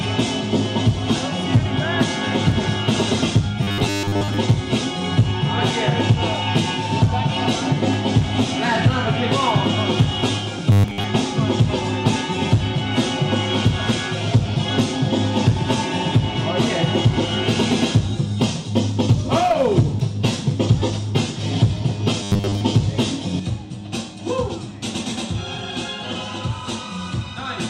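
A rigid, metallic buzz near 100 Hz is heard from 3.63 to 4.37 s, 10.72 to 11.04 s and 22.23 to 22.61 s. This robotic sound from repeated short buffers likely comes from late-arriving audio being patched by looping roughly 10 ms chunks for most of each stretch.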